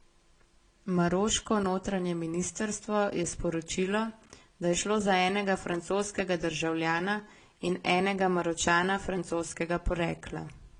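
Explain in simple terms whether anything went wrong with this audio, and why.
Something did go wrong, and it runs through the whole clip. The speech sounds a bit dull, with nothing above about 10.6 kHz, and carries two kinds of compression roughness heard together, piled on top of each other. That's the sound of transcoding between lossy codecs: the audio was likely squeezed by one codec, then squeezed again by another, so the second round worked on the first round's flaws and added its own.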